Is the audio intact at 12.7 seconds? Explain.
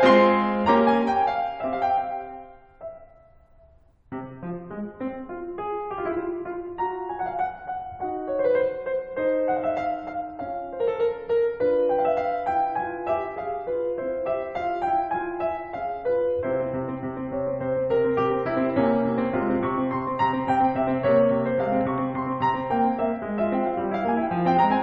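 Yes, the music at 12.7 seconds plays through intact, with no audible fault at that moment.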